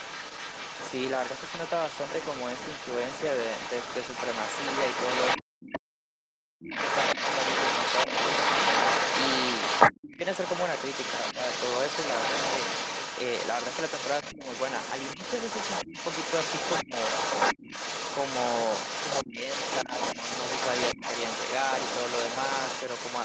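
Other side's voice leaking through runs from 0.0 to 5.79 s: a second voice sits under the talker, about 5 dB quieter, most likely because the echo canceller failed to strip the loudspeaker playback out of the microphone signal. From 6.7 s to the end the leak gets worse, reaching roughly the same level as the talker, so two voices compete throughout the rest of the clip.

Speech suppressed in double talk first appears at 5.38 to 6.75 s, where the talker's voice collapses in pieces for about a second in total, dipping by something like 40 dB. With both sides talking at once, the canceller likely could not tell local speech from echo and turned everything down. Shorter dropouts follow at 9.95 to 10.22 s (around 35 dB), 14.31 to 16.92 s and 19.23 to 19.91 s (around 20 dB each), and a brief 20.95 to 21.02 s dip of around 15 dB.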